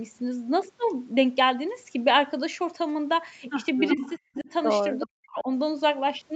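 Speech in which faint, delayed copies of the talker's own voice surface at 3.88 to 4.14 s, 4.35 to 4.43 s and 4.99 to 5.08 s, trailing the original by about 368 ms and sitting roughly 10 to 20 dB below it. This is echo leak, likely from a far end playing the call over a loudspeaker whose echo canceller let part of the microphone pickup return. Overlapping those echoes, the loudspeaker-side talker's voice dips by about 10 dB at 3.94 to 4.00 s, then drops out much more deeply, by as much as 35 to 40 dB, at 4.17 to 4.48 s and 5.04 to 5.49 s. This is speech suppressed in double talk, likely because the canceller could not separate the live talker from the returning echo and attenuated both together.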